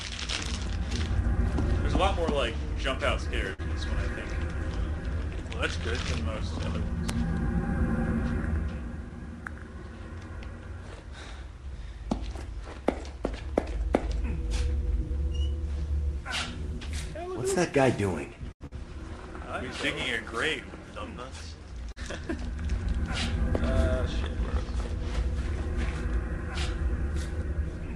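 Short stalls from a late packet occur at 3.53 to 3.61 s, 18.52 to 18.62 s and 21.92 to 21.98 s. Each time, the jitter buffer ran dry, and the receiver stretched the last sound for about 52 ms, 85 ms and 45 ms until the packet arrived. Nothing is lost, but the sound hangs briefly with a faint buzz or dip. A short concealed packet loss at 3.63 to 3.66 s follows the first stall closely. About 20 ms of audio never arrived, and the receiver bridged it with roughly 17 ms synthesised from the preceding sound before blending back, which leaves a tiny smear or wobble. A burst of packet loss at 18.66 to 18.73 s comes just after the longest stall. About 80 ms went missing, and the gap was filled with 49 ms of continued, fading sound. Playback then jumps ahead about 31 ms, recovering part of the delay built up by the stall, so a short stretch of audio is skipped.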